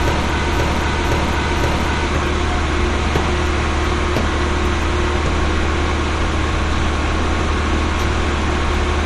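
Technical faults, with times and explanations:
0.00–2.08 s, broken-record loop: the clip opens already caught in a stutter, with the same 0.52 s fragment of sound replaying exactly, back to back, three times in a row before the audio moves on. Each pass is identical, so the rhythm is mechanical and nothing new is heard until just after 2 s. This is likely a player or stream stall that kept resending its last held fragment, so the material that belonged there is missing.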